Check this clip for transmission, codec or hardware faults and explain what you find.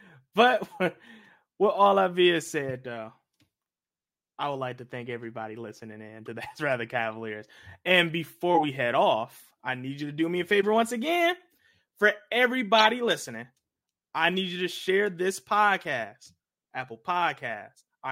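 The speech carries four corrupt frame decoded faults, each a brief chirp or burst of noise where a damaged compressed frame was played anyway.

At 2.69 to 2.71 s, just after "all I've", a short burst sits about 30 dB below full scale, spanning around two frames.

At 6.26 s, after "thank everybody listening in", a quieter blip appears, about 35 dB down, covering roughly one frame.

At 10.62 to 10.64 s, between "to do me a" and "once again", a burst reaches about 25 dB below full scale over around three frames.

At 12.78 to 12.84 s comes the loudest, about 10 dB below full scale and spanning roughly three frames.

In each case, flipped bits in the frame led the decoder to misread gains or codes, placing energy at the wrong frequencies for about the duration of the damaged frames.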